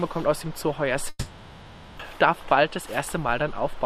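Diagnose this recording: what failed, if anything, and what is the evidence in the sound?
Network trouble, twice over. From 1.09 to 2.01 s there's a long network dropout: the last sound gets stretched into a fading buzz, then a brief silence, and when audio resumes about 0.62 s is simply gone. Likely packets lost in transit, with the receiver concealing the gap.

Right after, from 2.10 to 3.81 s, you get a jitter buffer speed-up. Everything runs at about 105% with unchanged pitch, slightly rushed, as the receiver trims tiny pitch-period slices, roughly a tenth of a second in total, to drain the backlog that piled up during the outage.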